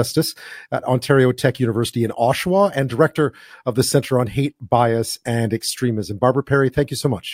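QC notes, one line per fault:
No faults found.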